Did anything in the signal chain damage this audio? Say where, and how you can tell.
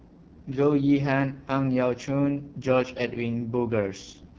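Yes, at the codec stage. The AMR wideband (HD Voice) codec roughens the speech throughout, giving raspy, buzzy voicing that fits its lowest 6.6 kbit/s mode.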